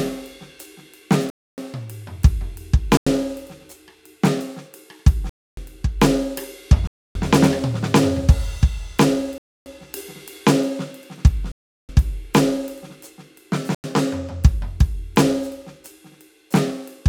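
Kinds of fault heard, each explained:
Block of digital silence: the music cuts abruptly to silence seven times. The gaps last about 93, 279 and 372 ms, which fits whole multiples of a 4096-sample block left unfilled in the output buffer.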